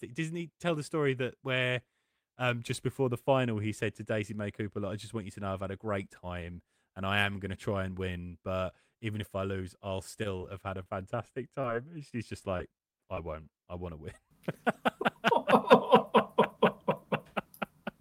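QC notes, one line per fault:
10.23–10.27 s, short stall from a late packet: right after "if I lose I'll" and before "have had a", the sound hangs for a moment, with about 18 ms stretched out while the receiver waited on a late packet. Nothing is actually lost. It just picks up where it left off, so you hear a slightly held sound with a faint buzz or dip. That wait also pushes the playout delay back by about 18 ms.
10.37 s, 10.83 s and 11.61 s, short concealed packet loss: three small holes, each about 20 ms of audio that never made it in time. The first sits in the same spot between "if I lose I'll" and "have had a". Each gap is covered by about 22 ms of the last sound carried forward and then crossfaded back into the real signal. The result is a quick smear or wobble, and a brief consonant can get swallowed.
12.09–13.50 s, repeated packet loss (robotic sound): in the lead-up to "I want" there are six dropouts in quick succession, about 80 ms missing in total, the longest around 24 ms. 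Roughly 8% of this stretch is patched with continued sound. Since each patch arrives before the last one has settled, the passage comes across choppy, with small pieces missing.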